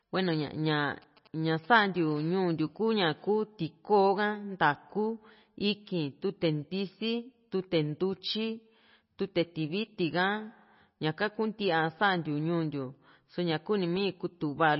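Throughout the speech, treble stops dead above 5.6 kHz and the remaining sound swirls and turns watery, with smeared attacks, likely MP3 compression at a low bitrate around 24 kbps. Unlike a simple low-pass filter, frequency detail flickers from frame to frame.

From 1.02 to 2.13 s, GSM signalling bursts from a nearby phone cut in at roughly 25 dB below the speech as a galloping dit-dit-dit of brief 217 Hz buzzes, broken into short groups rather than continuous.

From 2.16 to 3.20 s, a GSM phone buzz follows, quieter at about 34 dB below the speech. It is a steady, raspy 217 Hz tone rich in harmonics, with an unbroken pattern that fits a phone in an active call.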